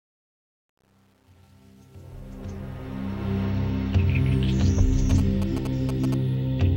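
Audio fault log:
0.00–3.43 s, truncation distortion on the fade: the fade-in is smooth in shape, but the gain stage seems to keep only about 9 bits with no dither. At the quiet start the waveform collapses into coarse steps, so it's gritty, worst up to about 2.66 s.
5.10–6.14 s, GSM signalling bursts: a nearby 2G phone doing its pre-call or pre-text handshake, picked up and rectified by the audio circuit. You get that galloping dit-dit-dit of short 217 Hz buzzes, sitting about 15 dB below the signal.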